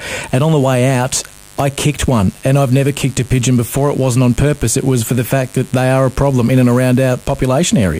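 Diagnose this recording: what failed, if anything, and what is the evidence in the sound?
Mains buzz runs throughout, a steady raspy buzz on a 50 Hz base, roughly 25 dB below the signal. This is an analogue wiring fault: switching spikes, twice per mains cycle, leak in through a poor shield or nearby dimmer.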